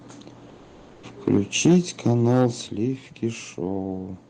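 Speech, with three kinds of fault. From 0.49 to 1.03 s the pause between phrases carries comfort noise in place of the background: for about 540 ms the real room sound, sitting about 27 dB below the loud speech, turns into a flat, featureless hiss about 3 dB quieter. The likely cause is discontinuous transmission, which fits Opus DTX. The sender goes silent when it detects no speech, and the receiver fills the gap with synthetic noise. Microphone overload follows at 1.27 to 1.38 s, 1.65 to 1.77 s and 2.06 to 2.47 s. The peaks run about 4 to 5 dB past the converter's limit and their tops are flattened, which gives the loudest syllables a harsh, crackly edge. Only a few percent of samples are clipped in the first and third events, but a noticeably larger share are clipped in the second. This is likely an input gain set too high for the converter. The microphone volume is stepped down twice: by about 2 dB at 1.66 s, inside the second clipped passage, and by about 6 dB at 2.67 s, just after the longest one. 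At each step, speech and background drop together in one abrupt move. This is likely the call software's automatic gain control reacting to the overloads by cutting the device's input level.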